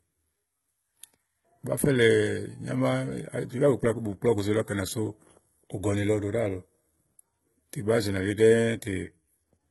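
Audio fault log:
Throughout, HE-AAC compression, likely: treble rebuilt by copying lower bands upward, so s sounds turn gritty and metallic, with nothing above about 11.8 kHz; fits a bitrate near 16 kbps.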